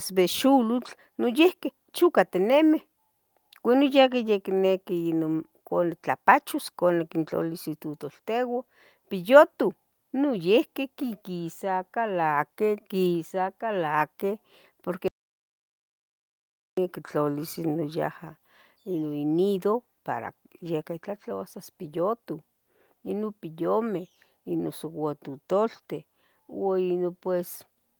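At 15.08 s the speech cuts to an audio dropout to silence, dead with no room tone, until 16.77 s. The input was likely lost while recording continued.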